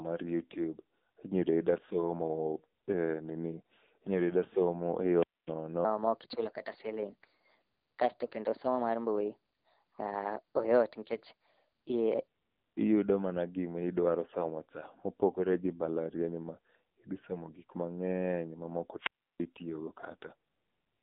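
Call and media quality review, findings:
AMR narrowband mobile codec, whole clip: speech band-limited to roughly 200 Hz–3.6 kHz, nothing above 4 kHz. Plainly buzzy, synthetic texture from a low-rate vocal-tract model, consistent with AMR-NB at 7.95 kbps. Probable component: 2G/3G mobile leg. Few excitation pulses per subframe, so the voice turns buzzy and synthetic.

Section at the wrong speed, 5.85–12.28 s: playback 1.28× fast, pitch raised about four semitones, speech hurried and high. Speed and pitch shift together, indicating a resampling or clock mismatch. Likely cause is an editor or player applying the wrong rate to this segment.

Wireless microphone squelch dropout, 18.98–19.47 s: hiss rises, then near-silence for about 333 ms before speech returns. Probable component: analogue FM radio mic and receiver. Signal fades below the squelch threshold, the receiver mutes, and audio resumes once the carrier recovers.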